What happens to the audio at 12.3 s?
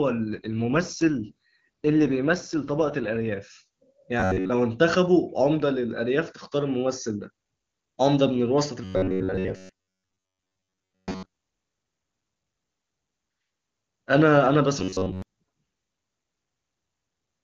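At 12.3 s the speech runs on intact, with nothing going wrong at that moment.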